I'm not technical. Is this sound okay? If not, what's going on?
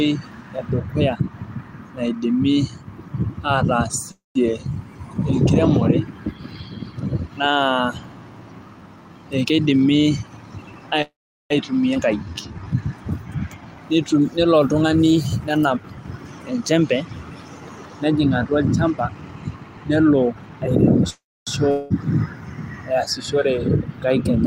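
No. This speech clip has several network problems typical of an internet call.

Call audio freeze at 4.11–4.38 s, 11.02–11.53 s and 21.10–21.50 s. The sound stalls, trails off as a fading buzz, then goes quiet for about 0.16 s, 0.39 s and 0.27 s. Delayed data is the likely cause. Nothing is lost. Playback resumes exactly where it stopped.

Jitter buffer speed-up at 9.25–10.80 s and 14.67–20.88 s. The call had built up too much delay. To catch up, tiny slices of sound were cut out. The speech runs at 113% and then 108% speed, but the pitch stays the same. This removes roughly 0.2 s and then 0.5 s. It sounds rushed.

Skip ahead at 11.94–11.98 s. The playback jumps forward with almost no pause. Roughly a tenth of a second of speech is simply gone. The two sides of the jump are joined directly, so a bit of a word may vanish.

Jitter buffer slow-down at 12.17–12.65 s. The reserve of sound was running low. 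To rebuild it, tiny slices were repeated. The speech plays at 80% speed, stretched by 0.107 s. It sounds drawn out, at the same pitch.

Long network dropout at 21.71–21.93 s. No sound arrived for a moment, likely because data was lost on the network. A fading buzz covers the gap. About 0.2 s of speech is missing when the sound comes back.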